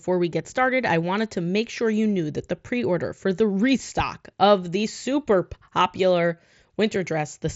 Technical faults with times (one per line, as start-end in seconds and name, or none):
none